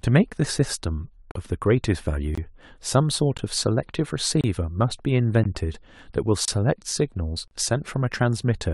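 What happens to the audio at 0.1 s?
At 0.1 s the speech plays through cleanly, with no dropout, click, distortion or other fault to be heard at that moment.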